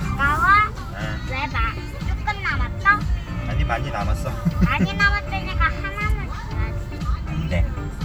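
No technical faults can be heard in this recording of sounds. There is nothing in it to point out.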